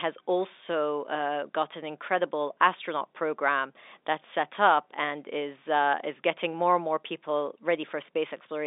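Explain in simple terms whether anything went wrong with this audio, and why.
Nothing stood out as wrong on listening to this speech recording, which simply has the narrower, slightly boxy sound that comes from being sent over an ordinary telephone line.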